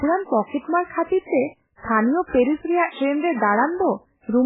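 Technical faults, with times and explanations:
Throughout, MP3 compression: the speech sounds watery and swirly, with a dull top end and a metallic warble on s sounds, while consonant onsets smear. Nothing survives above about 3.8 kHz, and the heavy damage fits a very low bitrate near 8 kbps. The likely cause is an encoder starved of bits, cutting the treble at a fixed point and zeroing weak frequency lines that flicker on and off between frames.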